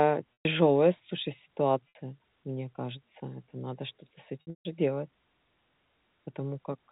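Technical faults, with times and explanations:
0.34–0.45 s, 1.89–1.95 s, 4.41–4.65 s: packet loss with pitch repetition. Lost audio is bridged by repeating the last pitch period, giving a held, buzzy tone. The 120 ms gap and the 210 ms scattered loss, with a 150 ms longest run, outlast the roughly 50 ms fade and drop to silence. On a spectrogram, harmonics freeze into flat lines before fading. The waveform shows identical repeating cycles that shrink.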